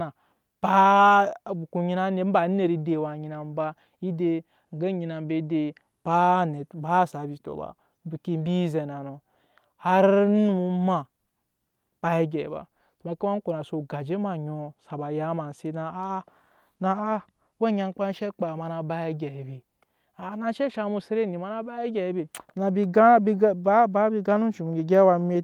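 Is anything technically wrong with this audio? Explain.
No audible technical faults.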